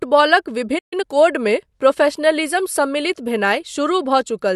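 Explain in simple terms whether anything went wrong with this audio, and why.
At 0.78 s the speech cuts out into silence for about 0.13 s before resuming at 0.93 s. This is a playback stall: the player most likely ran short of incoming data, so it had nothing to play until more arrived.

From 0.93 to 1.05 s, just before "कोडमे प्रोफेशनलिज्म", the speech plays at double speed without rising in pitch. This is time-compressed catch-up: the player trims small slices of audio and blends the joins to recover the lost time.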